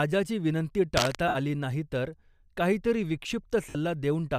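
A short speech recording with two distinct problems. From 0.97 to 1.15 s there is cable scratch noise: a dense, irregular burst of crackle and rustle roughly as loud as the speech itself, lasting under a fifth of a second. The ragged texture points to a worn cable or connector being moved, its contact resistance jumping about while the signal passes through it; that is the likely cause. The second problem is lost LE Audio frames, heard twice. From 1.28 to 1.35 s, a gap of about 67.5 ms, and from 3.69 to 3.75 s, about 60 ms, the sound briefly turns into a hissy, smeared wash instead of clear speech. That is the LC3 decoder concealing missing packets by repeating the last good spectrum with scrambled phase and letting it fade. The lengths fit runs of roughly eight to nine 7.5 ms frames, consistent with what is likely light LC3 coding at about 64 kbps.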